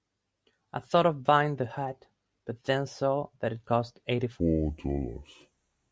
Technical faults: wrong sample rate

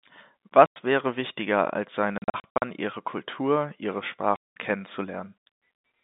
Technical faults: packet loss filled with silence

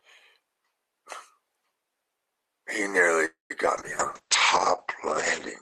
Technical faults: call audio freeze; short concealed packet loss; call bitrate drop

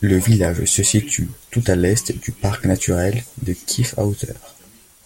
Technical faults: none

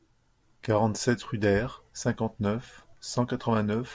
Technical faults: none

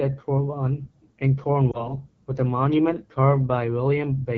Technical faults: AMR wideband (HD Voice) codec; lost AMR speech frames

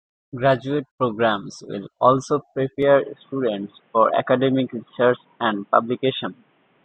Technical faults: input switched to a poorer device

